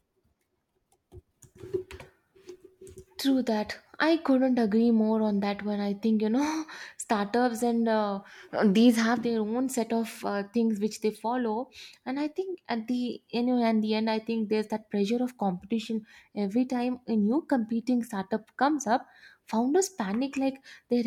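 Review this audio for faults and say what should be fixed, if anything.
No faults heard; nothing needs fixing.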